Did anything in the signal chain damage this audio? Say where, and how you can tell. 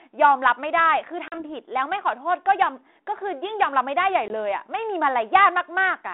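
Yes, packet loss on an ADPCM call in the network: gaps at 1.28–1.38 s and 4.28–4.34 s cut hard to silence. The mismatched predictor then brings the sound back briefly and slightly distorted.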